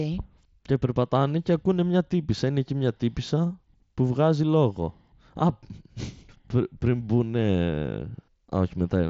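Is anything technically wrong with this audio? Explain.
No, nothing stood out as technically wrong on listening to this speech.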